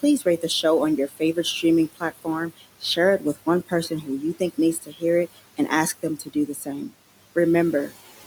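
Noise suppressor artifacts run through the whole clip. The suppressor is pulling down whatever bands it judges to be steady noise, by about 18 dB, and it decides that frame by frame. So the room noise, which sits about 18 dB under the speech, drops away in the gaps and creeps back in under each phrase.

On top of that, there are four spots where speech was cut by the noise suppressor because it mistook parts of the speech for noise. From 0.19 to 0.64 s, around a tenth of a second of material gets pushed down by up to about 11 dB. Between 1.08 and 1.64 s, about a fifth of a second is hit, dipping by up to about 13 dB. The longest stretch runs from 1.95 to 5.03 s, where roughly 0.7 s in total is pulled down by up to about 17 dB. The last is between 6.03 and 6.93 s, with around 0.3 s lowered by up to about 14 dB. In each spot the affected speech sounds swallowed and faint.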